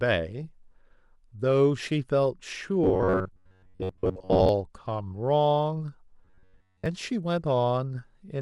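From 2.84 to 4.49 s and again from 6.25 to 6.86 s, the speech turns into a rigid metallic buzz at about 94 Hz: robotic sound from repeated short buffers, likely a repeated 11 ms slice replacing most of the real audio. A spectrogram shows evenly spaced harmonic stripes; the waveform shows identical repeating cycles.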